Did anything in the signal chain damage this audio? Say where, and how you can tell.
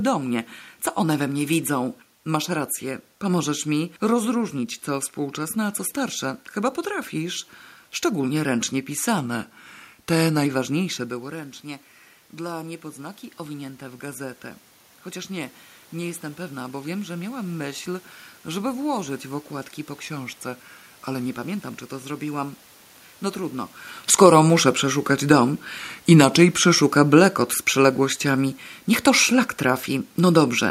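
Yes. Between 9.18 and 10.46 s, 20.03 and 21.26 s, and 25.79 and 26.82 s, the speech slows by about 6% and drops about 107 cents, roughly a semitone. Because speed and pitch move together in a single step, this is most likely a drift correction step at the driver or buffer stage. Clock-matching software briefly resampled playback to refill its buffer.

In the call-processing stage, automatic gain rising runs from 11.09 to 18.74 s. The level at the microphone falls by about 14 dB just after 11 s, as the talker moves back. The AGC then slowly adds about 9 dB over several seconds, and the room noise swells along with the speech. This gradual, uniform rise is what gives away gain control rather than the talker's own movement.

Automatic gain falling appears from 24.06 to 30.55 s, also from call processing. Around 23.5 s the talker moves, and the AGC then lowers its gain by about 4 dB over more than six seconds. 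Speech and background sink together. The third drift-correction step, at 25.79 s, falls inside this slow decline.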